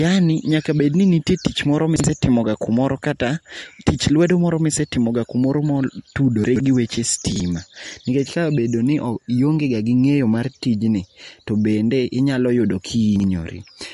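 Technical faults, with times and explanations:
Throughout, MP3 compression: speech sounds watery and smeared with nothing above 11.2 kHz, likely from a low-bitrate MP3 encode, around 48 kbps, starving weak frequency lines.
1.96–2.04 s, 6.44–6.6 s, 7.32–7.4 s and 13.16–13.24 s, chunks out of order: 40 ms pieces play one chunk late, three late at 6.44 s, giving jumbled moments. These fall between "bedni nitie tich moro" and "kumora kata tich lwedo", just before "gi weche", and just after "gi weche".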